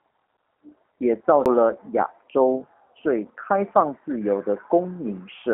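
Throughout, G.729 codec damage is plainly audible. The speech, rebuilt from a vocal tract model and sparse pulses, sounds rough and synthetic, consistent with an 8 kbit/s stream. On a spectrogram, energy sits between 200 Hz and 3.6 kHz with nothing above.

At 1.45 s, a CD skip: the player mutes for a few milliseconds, then resumes elsewhere in the audio. It is heard as a tick and jump, with a brief flat gap and a waveform discontinuity.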